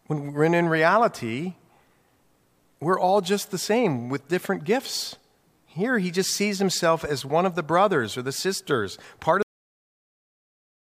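At 9.43 s, just after "or the sisters part", the speech stops mid-sound and drops straight into digital silence with no decay. This is a cut-off end: the final buffers were never written or played out, so the recording simply ends there.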